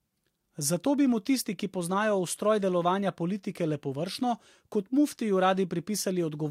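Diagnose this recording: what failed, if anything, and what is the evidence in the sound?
Nothing failed; no stage shows any fault here.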